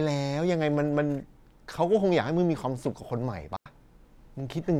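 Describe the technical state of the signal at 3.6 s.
At 3.6 s the speech drops into a clean hole of near silence from 3.56 to 3.66 s, about 97 ms, with no noise burst. This is a digital wireless dropout: the receiver lost too much data and muted briefly.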